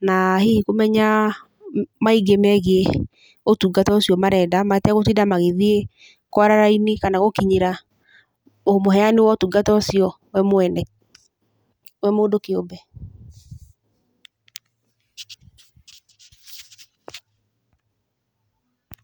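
No audible technical faults.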